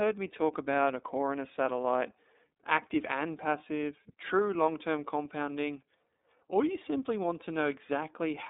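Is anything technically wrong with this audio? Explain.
Yes, the whole clip has gone through an iLBC codec. Everything above 3.8 kHz is gone, so speech sits in a phone-line band of about 250 Hz to 3.7 kHz. Each frame's excitation is coded on its own, consistent with 30 ms frames at 13.33 kbps, leaving speech a little rough and synthetic, with plainly audible codec damage.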